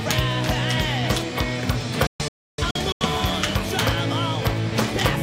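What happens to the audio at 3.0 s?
At 3.0 s the sound is inside a digital broadcast dropout, 2.07 to 3.06 s, where the receiver muted on failed frames. Several short holes, the longest 0.3 s, remove about 0.55 s. Waveform and spectrogram show flat, blank gaps with 3 ms fade edges.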